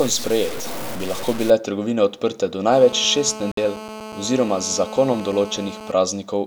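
From 0 to 1.5 s the speech sounds grainy and gritty, with distortion that tracks the voice and quiet stretches that sputter. The likely cause is low bit depth without dither: samples truncated to very few bits, consistent with about 5-bit truncation, leave an error only around 10 dB below the signal.

After "trgovine odprte do", from 2.72 to 5.92 s, a hard, raspy, steady buzz at 217 Hz with many harmonics sits about 14 dB below the speech. This is GSM phone buzz, where a nearby 2G phone on a call transmits in bursts that the audio circuit rectifies.

Within that buzz, from 3.52 to 3.58 s, the audio cuts abruptly to silence for 58 ms, then resumes further along as if it had kept playing. This points to a likely Bluetooth dropout, with a few audio packets arriving too late to play.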